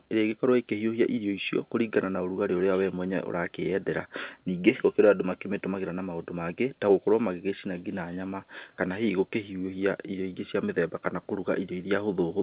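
No technical faults occur at any point in this speech, which carries the narrow, band-limited sound of ordinary G.711 A-law telephone coding.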